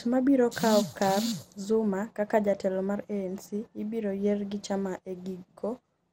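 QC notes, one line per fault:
Throughout: generation loss, smeared swirly speech with soft attacks and nothing above 16.7 kHz, likely from about ten MP2 96 kbit/s re-encodes piling up quantisation noise.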